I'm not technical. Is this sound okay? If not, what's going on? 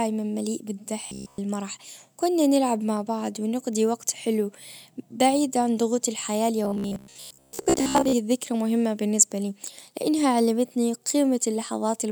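No. From 1.07 to 1.38 s, and again from 6.65 to 8.13 s, the speech becomes robotic sound from repeated short buffers: a rigid metallic buzz near 67 Hz. The likely cause is a tiny snippet replaying, entirely then mostly, while real audio is skipped. Unlike steady hum, it only appears in bursts.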